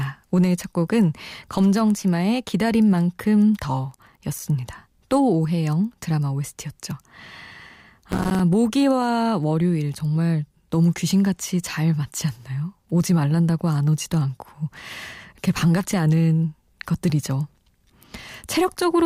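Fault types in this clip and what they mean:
processor overload crackle: The processing fails to deliver its short audio buffers on time, and each missed deadline is filled with silence, cutting a tiny hard-edged hole into the speech. Strings of these holes, spaced in a way that fits buffers of around 5 ms, sound as a gritty tearing crackle from 3.91 to 4.42 s and as a denser burst from 8.12 to 8.40 s. Each burst stops once the load passes.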